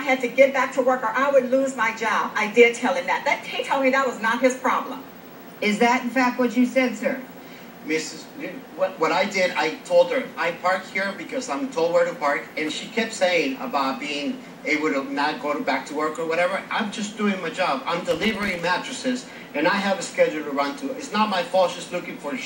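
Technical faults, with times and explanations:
18.11–18.64 s, processor overload crackle: for about half a second the audio is peppered with tiny silent gaps, a few dozen of them, each one a short buffer that was not finished in time and was left empty. Its hard edges turn the run into a burst of crackle laid over the sound. The very short gaps, fitting a buffer of around a millisecond and a half, set it apart from a single longer dropout.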